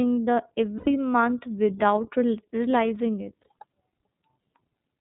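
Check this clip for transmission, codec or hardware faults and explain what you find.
Two faults are present: codec coloration throughout and two brief dropouts.

Throughout, the speech passes through the iLBC codec, which fits its 30 ms, 13.3 kbps mode. Nothing above 4 kHz survives, leaving plainly audible rough, synthetic-sounding speech.

Lost iLBC frames, at 0.78 to 0.88 s and 3.42 to 3.46 s: dropped packets, consistent with three frames and then one, are concealed by repeating the last pitch cycle with noise. Each gap sounds like a held, buzzy vowel, and the speech recovers almost at once.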